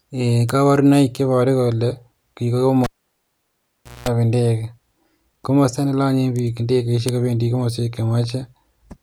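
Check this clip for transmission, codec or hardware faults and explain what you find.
One hardware fault is present: a cable pulled and plugged in, from 2.84 to 4.09 s. The live lead leaves its socket with a pop and about 1.2 s of near silence. On reinsertion only the tip touches first, letting in 0.2 s of 60 Hz mains buzz before a second pop brings the speech back.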